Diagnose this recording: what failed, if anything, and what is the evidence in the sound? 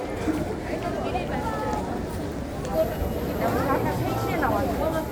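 Damaged data in the compressed stream is what failed, at the codec stage, with a brief blip at 2.95 s. A stretch of the encoded file got corrupted there, so the decoder misread those frames, lost sync and had to hunt for the next valid frame header before resuming clean playback.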